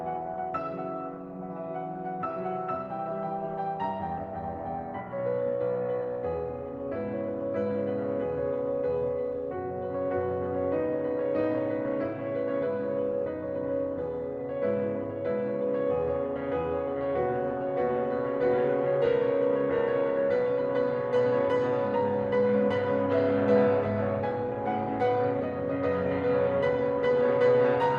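Listening to this music clip, nothing stood out as a technical problem.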